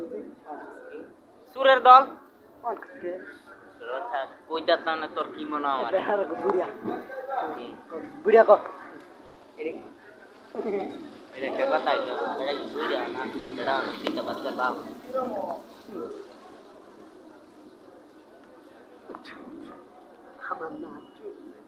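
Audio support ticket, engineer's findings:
Long network dropout, 9.25 to 9.46 s. Last sound continued as a fading buzz for about 180 ms, then audio resumes with about 60 ms never played. Likely cause: packet loss on the network path, with buffer delay shifting by around 70 ms. Spectrogram: smeared, repeating harmonic band decaying in energy; waveform shows a periodic envelope tapering off, then an abrupt jump where content is missing.

Jitter buffer slow-down, 9.60 to 10.02 s. Audio drawn out at unchanged pitch, playing at 88% speed, 57 ms added. Receiver rebuilding its reserve after the dropout by repeating single pitch periods. Spectrogram: harmonics stay level while formant transitions stretch horizontally; waveform shows near-identical cycles duplicated back to back.

Call audio freeze, 13.39 to 13.54 s. 120 ms fading buzz fill, then sound continues from where it halted, nothing lost, playout pushed 120 ms later. 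Likely cause: packets held up in transit, jitter buffer emptied. Spectrogram: a frozen, decaying harmonic smear inserted mid-stream; waveform shows a repetitive tapering segment with no discontinuity on resumption.

Jitter buffer speed-up, 16.19 to 16.97 s. Hurried delivery at same pitch, running at 112% speed, roughly a tenth of a second cut. Receiver trimming excess buffered delay by dropping short runs of one or a few pitch periods repeatedly. Spectrogram: compressed transitions, harmonics unchanged in frequency; waveform shows small splice points where cycles are skipped.

Call path: Opus, band-limited near 12 kHz, visible as an empty spectrogram region above that line.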